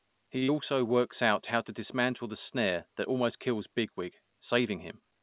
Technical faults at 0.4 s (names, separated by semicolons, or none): short stall from a late packet; short concealed packet loss